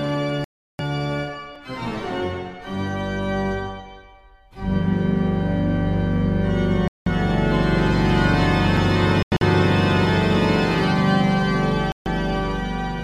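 At 0.44 s the sound cuts out until 0.81 s and resumes further along, as if it had kept playing. This Bluetooth dropout likely comes from packets reaching the headphones too late and being dropped. At 1.55 s there is a sharp tick. It is a block of digital silence about 3 ms long, with no fade. Its length fits a 128-sample output buffer that was not filled in time. More dropouts follow at 6.88 to 7.08 s, 9.23 to 9.43 s and 11.92 to 12.08 s. The middle one is broken into short holes, the longest about 0.09 s.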